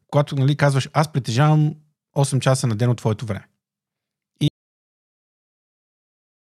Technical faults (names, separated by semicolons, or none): audio dropout to silence